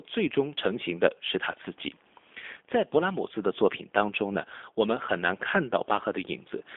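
G.729 coding runs throughout: the speech is rebuilt from a vocal tract filter and sparse pulses, confined to 250 Hz to 3.6 kHz, plainly rough and synthetic, which fits an 8 kbit/s G.729A stream.

VoIP packet loss concealed by the speech codec occurs at 1.52 to 1.55 s. About 20 ms went missing, consistent with one lost packet, and the decoder filled it with a fading extrapolation.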